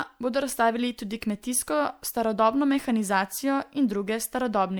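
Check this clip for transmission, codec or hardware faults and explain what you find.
There is one codec fault, present across the whole clip. Generation loss, throughout: likely MP3 re-encoded about three times, fitting 128 kbit/s, each pass re-quantising on a shifted grid, leaving swirly, hollow speech with blurred attacks.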